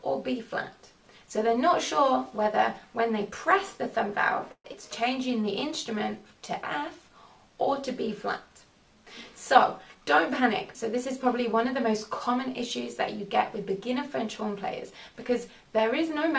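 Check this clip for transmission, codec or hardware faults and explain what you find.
Several transmission faults are present, all tied to packet timing on a call path whose audio stops at 8 kHz, which points to G.722 at around 64 kb/s.

A call audio freeze runs from 4.52 to 4.66 s, likely from packets held up in transit. The last sound is stretched as a fading buzz or hiss for 125 ms, including 70 ms of silence. This shows as a flat gap in the waveform and a smeared, decaying band on the spectrogram.

A skip ahead follows at 4.72 to 4.75 s. About 70 ms of audio is dropped and both sides are joined almost directly. The spectrogram shows an abrupt discontinuity.

A jitter buffer slow-down runs from 5.04 to 6.29 s at 95% speed. Repeated pitch periods add 70 ms, so the sound is drawn out at the same pitch. The spectrogram shows slightly stretched, repetitive striations.

A jitter buffer speed-up occurs at 9.58–10.41 s, 10.84–11.87 s and 13.21–14.46 s, at 103–104% speed. 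Roughly 40–50 ms is trimmed each time, so the sound runs a little faster but keeps its pitch. The spectrogram shows compressed segments.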